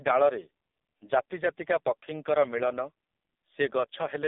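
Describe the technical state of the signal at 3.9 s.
At 3.9 s the audio is still running through the AMR narrowband mobile codec at a very low bitrate, around 5 kbps. It cuts everything above 3.8 kHz and makes the speech heavily buzzy and synthetic.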